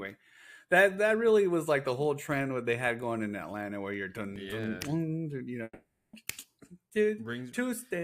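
The audio carries CD scratch ticks between 3.94 and 4.64 s: six regular clicks of uneven strength, none longer than a couple of milliseconds. Their steady spacing, tied to each disc revolution, separates them from random digital clicks. From 5.63 to 6.14 s the sound smears into a fading buzz for half a second, then falls to brief silence before resuming with half a second of audio missing. This is likely a long network dropout, whose sustained concealment and lost material differ from the short, periodic scratch ticks.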